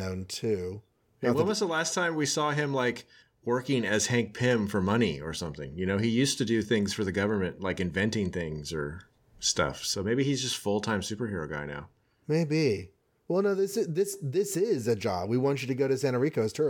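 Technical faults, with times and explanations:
Nothing stood out on listening to the speech as a technical fault at any point.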